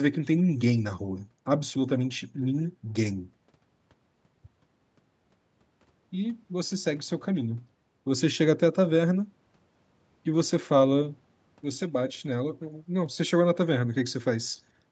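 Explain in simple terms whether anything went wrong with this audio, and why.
Nothing stood out as wrong on listening; the speech sounds like a normal call, and its highest frequencies stop at about 8 kHz as call audio normally does.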